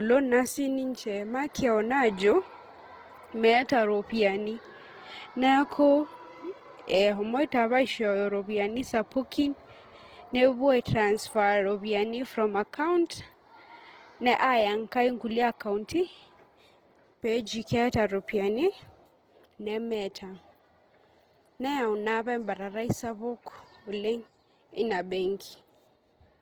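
Opus compression throughout: speech stays fullband to about 20.2 kHz but sounds grainy and rough, likely from noise-filled bands in Opus CELT mode near 16 kbps.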